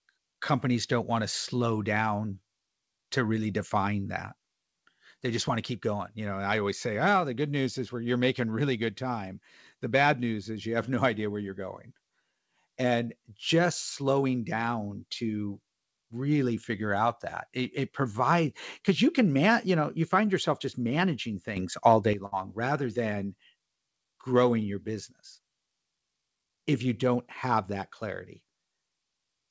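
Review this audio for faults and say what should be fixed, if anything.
At 21.57 s the level jumps up by about 10 dB, with the background rising too. It drops back at 22.13 s. This sudden gain jump is likely a gain setting applied without a ramp.

From 22.26 to 22.34 s there is a burst of packet loss. About 60 ms is filled with a fading continuation of the last sound. Then 60 ms of audio is skipped.

Ramp every gain change over several milliseconds, and give the jitter buffer enough depth to absorb late packets.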